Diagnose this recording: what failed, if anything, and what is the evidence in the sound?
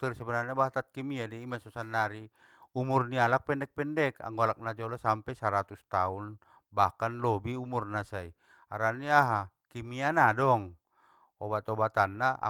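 Nothing in the chain audibly failed: the speech signal stays continuous and steady at every stage, with no breaks, level jumps, distortion or timing irregularities to point to.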